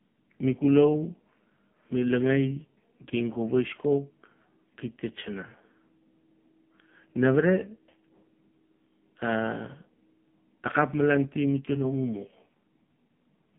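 From start to finish it's AMR narrowband mobile codec: nothing above 3.6 kHz, a thin 150 Hz–3.4 kHz band, and a heavily buzzy, synthetic sound that fits a very low bitrate around 6 kbps.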